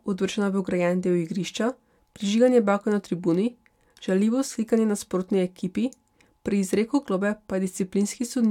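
No technical faults are audible.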